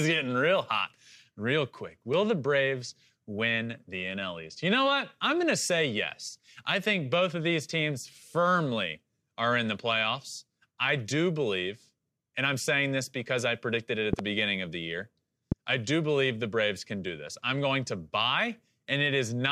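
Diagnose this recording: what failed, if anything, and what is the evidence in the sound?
The speech is interrupted by loud pops. The first event runs from 14.13 to 14.22 s and is a double pop, two sharp clicks in quick succession. A single pop follows at 15.52 to 15.54 s. Both peak at about 15 dB above the speech, which continues underneath unbroken. The likely stage is the analogue wiring. A sudden voltage step from a loose plug, switch contact or static discharge entered the signal path. The downstream circuitry shaped it into a brief thump.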